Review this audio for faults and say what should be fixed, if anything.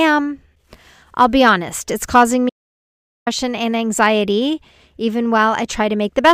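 Audio dropout to silence, 2.50 to 3.27 s: speech cuts to silence for 0.77 s, likely a lost or muted input. The waveform flatlines and the spectrogram shows a black gap with no room tone. Secure input connections and monitor the live feed so any interruption is caught and retaken during the session.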